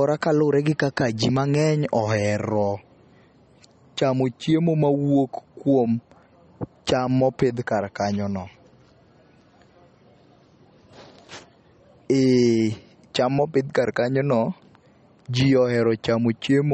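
Across the whole speech clip there is a hard ceiling with nothing above 8.4 kHz, so the s sounds lose their crisp top and carry a metallic chirp, while the quieter detail has a plainly audible watery swirl. This points to MP3 compression as the likely cause, at a low bitrate that fits roughly 33 kbps. Short of bits, the encoder cuts off the treble and lets weak frequency lines drop in and out from frame to frame.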